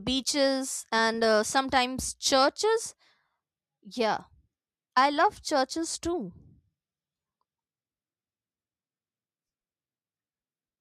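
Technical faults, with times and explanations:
No technical faults are audible.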